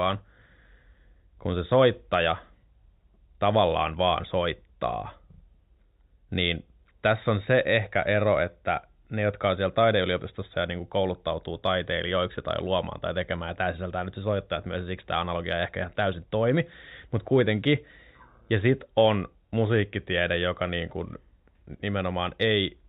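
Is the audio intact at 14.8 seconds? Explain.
Yes, the speech at 14.8 seconds is intact, carried through the G.711 telephone path with its narrow band below 4 kHz and no fault at that point.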